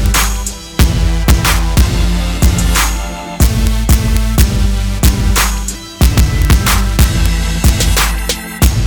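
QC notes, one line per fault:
Throughout: integer overflow. Peaks pushed about 1 dB past full scale wrap to the opposite sign instead of limiting. Only around one sample in a thousand flips, giving sharp cracks on loud moments. The waveform shows sudden full-range jumps; the spectrogram shows thin broadband vertical lines.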